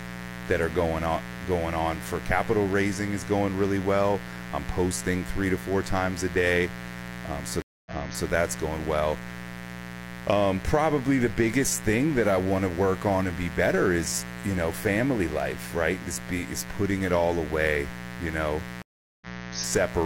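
Mains buzz at 60 Hz runs under the whole recording, roughly 10 dB below the speech. Switching spikes stack harmonics into the kilohertz range, so it sounds raspy, not like a smooth low hum.

A stream reconnect occurs at 7.62 s and again at 18.82 s. Each time the connection broke and a fresh decoder restarted mid-stream. The first cuts out for 238 ms and resumes 418 ms earlier, repeating a short stretch. The second goes silent for 395 ms and resumes slightly later, skipping a little. That shift in position is what sets it apart from a plain dropout.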